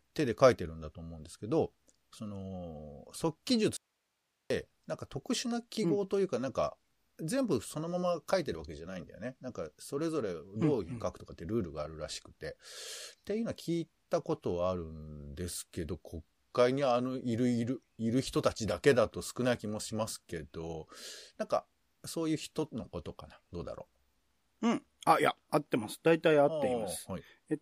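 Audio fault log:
3.77 to 4.50 s: audio dropout to a faint residue. The speech cuts out abruptly for about 0.74 s, then returns. Only faint hiss fills the gap, roughly 50 dB below the speech. The likely cause is a brief loss of signal while the later path stayed live.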